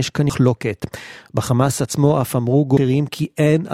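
At 0.30 s and again at 2.77 s the speech is broken by damaged data in a compressed stream. Corrupted bytes make the decoder misread the frame at each point, lose sync and hunt for the next valid frame header, so each event is a short chirp or blip. On a spectrogram each appears as a narrow vertical smear of garbled energy across the bands. The waveform shows an abrupt discontinuity there.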